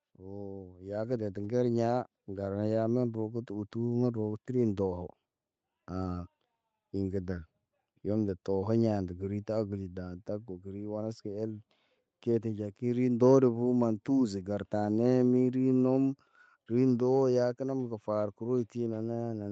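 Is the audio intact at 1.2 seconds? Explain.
No. At 1.2 seconds the sound is partway through an automatic gain rising that runs from 0.17 to 3.77 s. The gain control judged the input too quiet and raised its gain step by step, by about 9 dB in all, so the level climbs steadily over those three and a half seconds. What marks it as gain control, rather than the talker moving closer, is that the background noise swells along with the speech.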